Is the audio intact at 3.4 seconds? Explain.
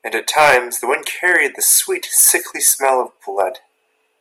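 No. From 3.40 to 3.43 s the speech shows hard clipping: peaks pushed about 2 dB past the level the stage could pass are sliced flat, adding high harmonics heard as a brief crackle. The waveform shows squared-off tops, and the spectrogram shows a short vertical smear of high-frequency energy.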